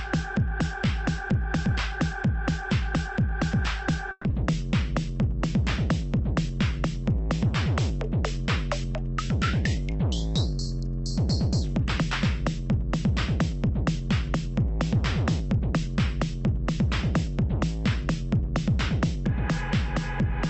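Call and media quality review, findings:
Call audio freeze, 4.11 to 4.26 s: 130 ms of fading buzz or hiss bridges a gap, with no audio lost and playback delayed 130 ms. Likely late packets draining the jitter buffer.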